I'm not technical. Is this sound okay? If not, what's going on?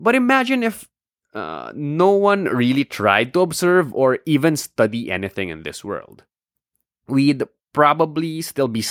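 Yes, nothing wrong with this one: no technical faults anywhere in the recording.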